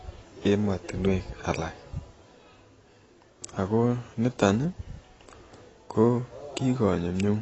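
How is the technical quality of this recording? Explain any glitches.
Dull and muffled throughout, with a fizzy, warbling edge on sibilants and nothing above 8 kHz: likely AAC compression at a low bitrate, around 24 kbps, trimming and smearing the spectrum.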